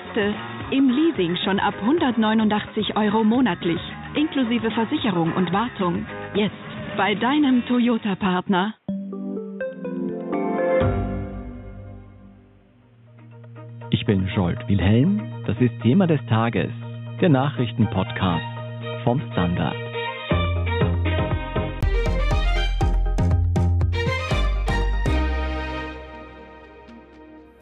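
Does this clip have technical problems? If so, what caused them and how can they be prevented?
Yes. From the start until 21.83 s the sound is dull and boxy, with nothing above 3.8 kHz, over a faint background noise well below the sound. At 21.83 s a gap of about 20 ms is followed by full-bandwidth audio at the same loudness. The likely cause is an input switched to a poorer device. A codec bandwidth drop or a low-pass filter would not bring this abrupt gap, change of tone and different noise floor, which point to a different piece of hardware. To prevent it, lock the recording input to one microphone and disable automatic device switching and headset call profiles before recording.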